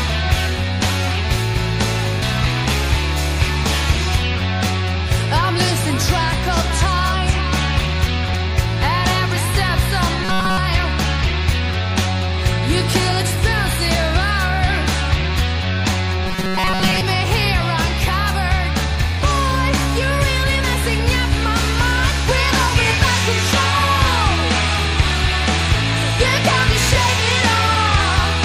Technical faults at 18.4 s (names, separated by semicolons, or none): MP3 compression